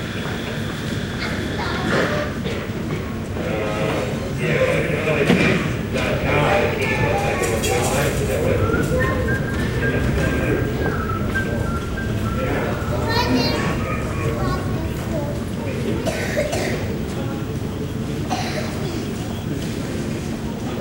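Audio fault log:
2.06, 7.48 and 19.74 s: dropped buffers (overrun). Each is a jump where the sound skips ahead by roughly 40, 20 and 10 ms, likely because samples were overwritten before the program collected them.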